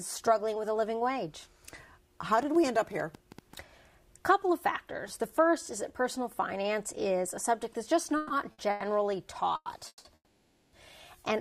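From 2.43 to 3.54 s comes a train of clicks, about ten of them. They arrive at about 8 per second at an uneven pace and peak at about the level of the sound. Interference or a faulty connection or power supply likely injects them.

A call audio freeze follows at 8.17 s, lasting 130 ms. Packets were likely delayed until the jitter buffer emptied. The last sound continues as a fading buzz or hiss.

At 8.52 s, a short stall from a late packet holds the sound 60 ms too long.

Further freezes come at 8.70 s (100 ms), 9.56 s (100 ms), 9.88 s (170 ms) and 10.15 s (580 ms). The last three fade into brief silences.

Playback resumes where it stopped each time, so nothing is lost.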